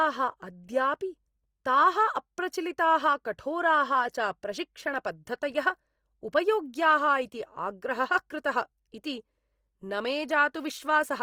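Throughout, the speech sounds rough and grainy, likely from Opus compression in CELT mode at a rate fitting about 24 kbps. Starved bands are filled rather than left empty, so a spectrogram shows few holes but a speckled, noisy texture, still reaching 20.3 kHz.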